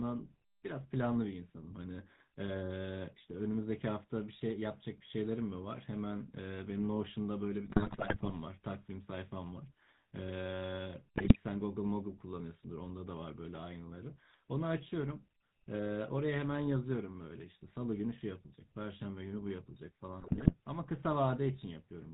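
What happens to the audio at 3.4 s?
At 3.4 s the speech sounds buzzy and gravelly, with nothing above 4 kHz, as it does throughout the clip. This is GSM full-rate codec damage, consistent with a 13 kbps stream: a vocal-tract model driven by sparse, regularly spaced excitation pulses.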